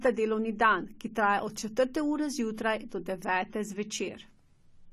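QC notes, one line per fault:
Throughout: AAC compression. Nothing sounds above 14 kHz, and sibilants and sustained sounds carry a smeared, fizzy, warbling texture. This is likely AAC-LC at a rate that fits about 32 kbps. A plain low-pass filter would dull the top without this smearing.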